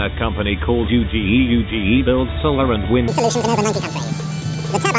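From 3.08 s to the end, a wrong sample rate fault doubles speed and raises pitch 12 semitones, consistent with 8 kHz material played back at 16 kHz without conversion.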